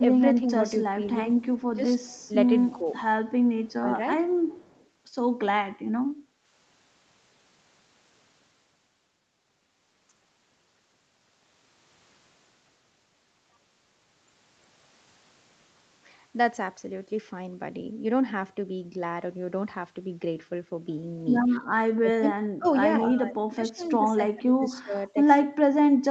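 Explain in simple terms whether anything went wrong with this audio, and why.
Speech suppressed in double talk shows up from 0.0 to 0.83 s and 1.75 to 3.86 s as short dips. From 21.58 s to the end it almost disappears, likely because the echo canceller turned everything down while both sides talked.

There's also an echo leak, a very faint copy of the voice about a fifth of a second late, at 1.6 to 2.73 s, 3.69 to 4.87 s, 22.65 to 22.7 s and 23.82 to 23.9 s. A loudspeaker's echo likely slipped past the canceller.

Background gated by the echo canceller: from 6.18 to 6.44 s the room sound briefly dips, because the canceller clamped the microphone down while the loudspeaker played.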